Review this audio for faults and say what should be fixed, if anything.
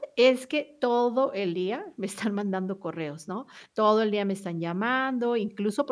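No technical faults can be heard in this speech recording. Nothing needs to be fixed.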